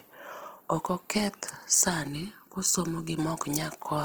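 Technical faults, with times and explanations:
Throughout, Opus compression: the speech sounds rough and grainy, with a noisy texture rather than swirling holes, yet the top end stays open out to about 20.3 kHz. This is likely a fullband Opus encode in its music mode at around 16 kbps, filling starved bands with folded or noise content.
2.07 to 3.19 s, channel delay (comb filtering): the sound turns hollow and phasey, with a notched colour. One channel runs late by roughly 0.7 ms, so when both are summed to mono, shared content cancels at evenly spaced frequencies, the first near 700 Hz.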